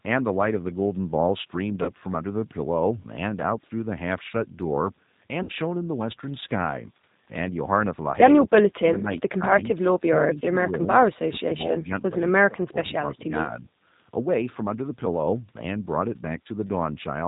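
The whole recording passes through the G.729 codec at 8 kbit/s. Nothing above 4 kHz survives. The speech is rebuilt from a filter, a pitch predictor and a few pulses per frame, so it sounds plainly rough and synthetic throughout.

At 1.83 to 1.91 s, there is VoIP packet loss concealed by the speech codec. About 40 ms of audio is missing, which fits two lost packets. The decoder stretches the last sound out and lets it fade. The voice stays weak briefly afterwards.

At 4.62 s, a block of digital silence lasting 0.38 ms cuts the signal out and back with no fade. The abrupt edges make a tick or dip rather than an audible hole.

At 5.43 to 5.51 s, packet loss concealment returns. This time 60 ms is lost, which fits three packets. The fading extrapolation lasts longer here, and the speech takes a moment to recover its strength.

From 11.05 to 11.93 s, the speech dips hard, by around 30 dB at its deepest, over most of that span. 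The likely cause is speech suppressed in double talk. An echo canceller turns down the talker when both sides speak at once.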